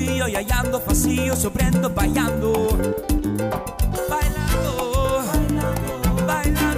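No audible technical faults anywhere in the recording.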